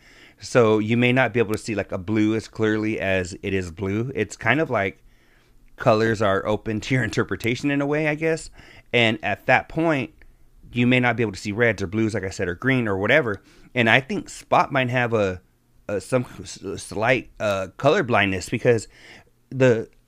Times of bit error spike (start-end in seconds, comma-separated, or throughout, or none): 1.54, 7.44, 17.51